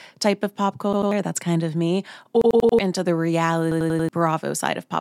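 At 0.93 s, just after "type of pop", a repeated buffer stutters: the same 93 ms slice, which fits a 4096-sample buffer, plays twice more until 1.12 s, so about a fifth of a second of speech is lost. After "kind of me" at 2.42 s, and again at 3.72 s, it repeats four extra times, running to 2.79 s and 4.09 s. A waveform shows identical blocks with hard edges at each join, and a spectrogram shows copied stripes with vertical click lines.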